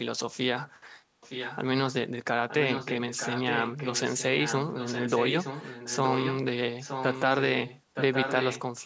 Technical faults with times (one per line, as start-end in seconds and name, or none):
1.00-1.20 background gated by the echo canceller
1.21-1.59 echo leak
2.49-6.35 echo leak
6.80-7.35 echo leak
7.66-8.62 echo leak